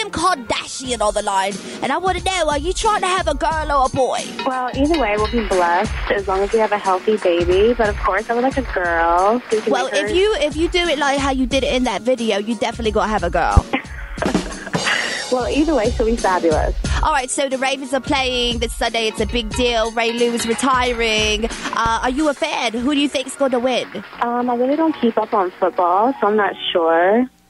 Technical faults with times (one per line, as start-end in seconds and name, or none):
13.57-13.61 loud pop
21.86-22.10 loud pop